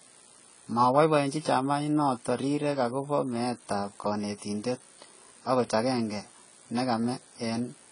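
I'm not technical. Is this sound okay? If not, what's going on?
No. AAC compression damage runs from the start to the end of this speech recording, and it is plainly audible. Everything above 10 kHz is gone, so the speech sounds dull and muffled, with a swirly, fizzy edge on hissy sounds like s and sh. The likely cause is heavy squeezing by an AAC-type encoder: to save space, it throws away high frequencies and detail it judges you won't miss, and too much was removed here.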